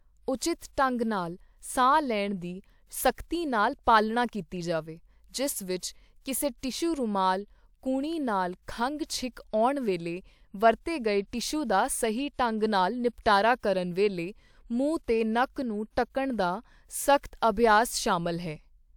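Nothing in this speech recording points to a technical fault; the signal stays continuous and steady throughout.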